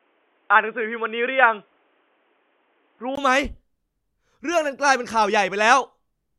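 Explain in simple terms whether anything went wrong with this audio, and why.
The speech sounds dull and boxy until 3.17 s, then a tiny gap and suddenly clearer sound. This abrupt change is likely an input switched to a poorer device, not steady muffling throughout.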